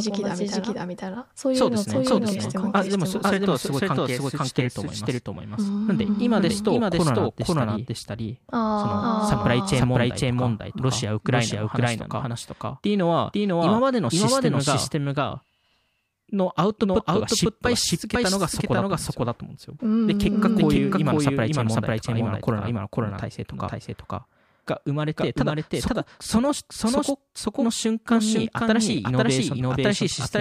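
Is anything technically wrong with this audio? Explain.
Yes. Throughout the speech, everything is heard twice: a second, equally loud copy trails the first by about half a second, so each phrase overlaps its own repeat. This doubled audio track has no reverb tail or room colouring; the late copy is just as crisp and full-band as the original. The likely cause is the same signal being captured again through a slower path, or an edit leaving two copies out of step.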